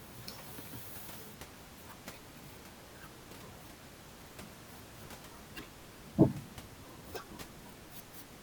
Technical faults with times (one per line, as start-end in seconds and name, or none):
none